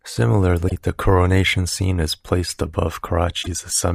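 Speech, with damaged data in a compressed stream at two points. The first runs from 0.66 to 0.72 s. The second runs from 3.40 to 3.47 s. Each lasts well under a tenth of a second. Both are heard as brief glitches cutting across the speech. Bytes in the encoded stream were corrupted at those spots. The decoder misread those frames, lost sync, and had to hunt for the next valid frame header.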